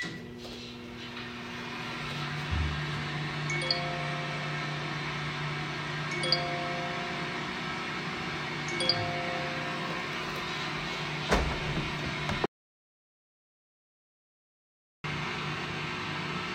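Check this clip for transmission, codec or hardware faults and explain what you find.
There is one fault: an audio dropout to silence from 12.46 s to 15.04 s. The sound cuts off abruptly mid-flow and resumes just as abruptly about 2.58 s later. The gap is silent, with no background noise or room tone underneath. The likely cause is a lost input, such as a disconnected device, a failed link or an accidental mute, while the recorder kept writing silence. Whatever sounded during those 2.58 s is unrecoverable.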